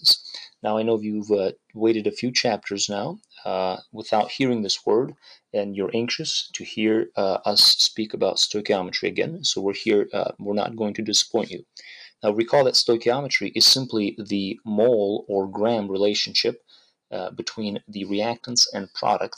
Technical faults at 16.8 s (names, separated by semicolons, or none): sound cut by the noise suppressor